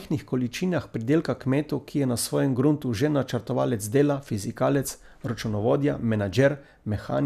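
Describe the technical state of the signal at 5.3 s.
At 5.3 s the speech signal is intact, with no audible fault at that moment.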